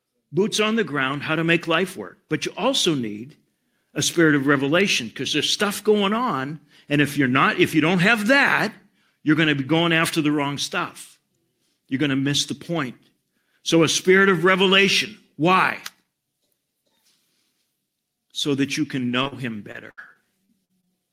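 From 0.11 to 3.29 s, the speech and background swell together by about 5 dB. That is automatic gain rising: the gain control judged the input too quiet and turned it up gradually.

Just after "that you can", two brief smears at 19.23 s and 19.28 s are short concealed packet loss. Roughly 20 ms and 40 ms of audio arrived too late, and the receiver patched each hole by extending the preceding sound.

From 19.72 to 20.93 s, the speech turns choppy. This is repeated packet loss: gaps up to 72 ms kept recurring, and about a fifth of that stretch was filled with synthesized continuation.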